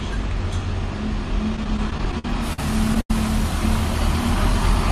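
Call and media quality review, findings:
Repeated stalls (stutter), 1.56–3.11 s: jitter buffer underran 14 times, late packets concealed by continuing prior sound, about 300 ms added, longest gap 89 ms, nothing lost, audio drags.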